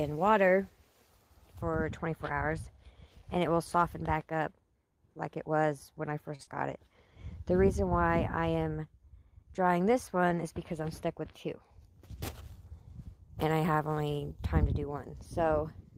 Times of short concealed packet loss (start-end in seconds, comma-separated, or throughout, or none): 6.43-6.49